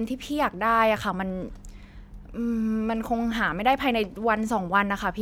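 No technical faults can be heard anywhere in it.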